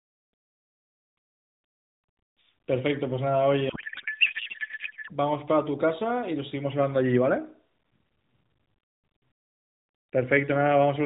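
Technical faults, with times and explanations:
3.70 to 5.11 s, codec payload misread: speech becomes garbled warble barely following it, unlike a silent dropout, fitting octet-aligned AMR frames read as bandwidth-efficient.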